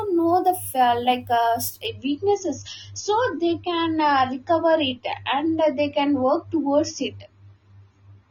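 An adaptive stream dropping to a lower bitrate takes hold at 1.87 s and lasts to the end of the speech. The player switched to a cheaper rendition, likely because the connection slowed, and the change is abrupt with no gap. Everything above 6.9 kHz disappears, leaving the voice dull with more codec smearing, which fits a fall from around 96 kbit/s to roughly 24 kbit/s AAC.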